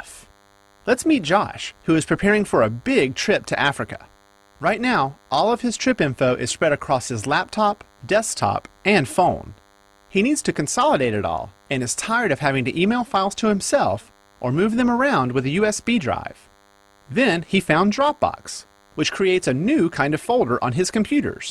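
A DECT cordless phone buzz runs through the whole recording: a nearby handset or base sends radio bursts 100 times a second, which the audio circuitry rectifies into a thin, steady 100 Hz buzz rich in harmonics, sitting well below the main signal.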